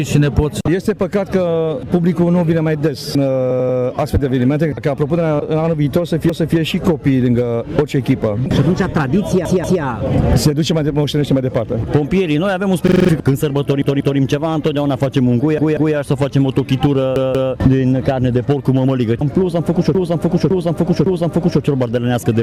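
The audio has two separate faults. The first is repeated frames, where a stretch of compressed data gets decoded more than once, so you hear the same slice replayed as a stutter. It happens at 3.51–3.79 s (a roughly 93 ms block plays three extra times), 6.30–6.57 s (a 279 ms block plays once more), then 9.45–9.82 s, 13.82–14.19 s, 15.58–15.95 s and 17.16–17.53 s (a 186 ms block plays twice more each time), and 19.95–21.62 s, where a 557 ms chunk plays three extra times and adds about 1.7 s. The second fault is a system hang loop at 12.88–13.09 s. The machine stalled while the output hardware kept cycling one 42.67 ms piece of audio, which fits a 2048-sample buffer. That gives five rapid repeats at 23.4 Hz and swallows about a fifth of a second of the real audio.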